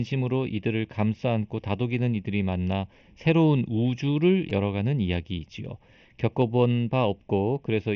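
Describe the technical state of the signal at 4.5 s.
At 4.50 s, concealed Bluetooth headset packet loss: about 15 ms was filled by repeating recent waveform, heard as a brief buzzy blip and seen as a short periodic repeated cycle. Throughout, channel delay causes comb filtering: a lag of under half a millisecond, summed to mono, gives hollow coloration and evenly spaced spectrogram notches from around 1.5 kHz.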